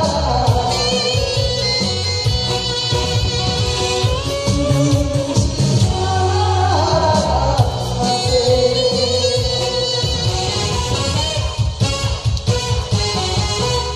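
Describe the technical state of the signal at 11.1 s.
At 11.1 s the signal is intact, with no audible dropout, distortion, glitch or other technical fault.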